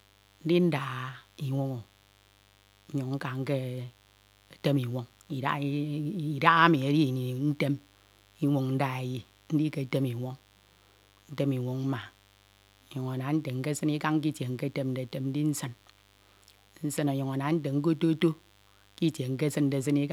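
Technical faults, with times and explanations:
Throughout, mains buzz: there's a steady, raspy buzz sitting roughly 35 dB under the speech, locked to 50 Hz mains. It's not a clean hum but a gritty one, because something like a dimmer, a rectifier or an unshielded run is letting sharp switching spikes into the signal twice per mains cycle, and those spikes spray harmonics of 50 Hz well up into the kilohertz range, which gives it that edge.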